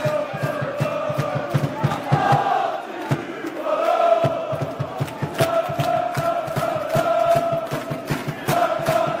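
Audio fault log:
6.04–9.2 s: adaptive stream at a lower bitrate. Codec artefacts suddenly rise without any gap, which fits a switch from 64 to 24 kbit/s Opus.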